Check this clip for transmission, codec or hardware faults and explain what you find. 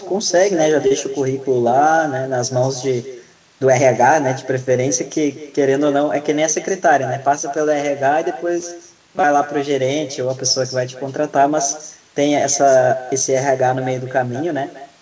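Four faults are audible in this speech, carried over a G.722 wideband call path that stops at 8 kHz.

Echo with no canceller runs throughout: a thinner copy of the speech returns about 14 dB down, roughly a fifth of a second later. It is a distinct repeat, not a smooth reverberant tail.

A short stall from a late packet occurs at 0.87 to 0.92 s. The sound is held for 38 ms until the packet arrives, and nothing is skipped, which distinguishes it from a dropout.

A jitter buffer speed-up runs from 6.30 to 7.01 s. Short pitch-period pieces are trimmed to drain the backlog, so speech runs 4% faster while pitch stays unchanged, unlike resampling.

Robotic sound from repeated short buffers appears at 8.60 to 9.24 s: a rigid metallic buzz at 188 Hz replaces most of the audio. It likely comes from a roughly 5 ms block being looped. The fixed pitch separates it from ordinary codec noise.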